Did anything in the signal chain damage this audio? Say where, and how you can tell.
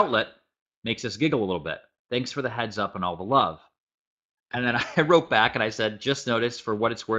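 No damage from the chain.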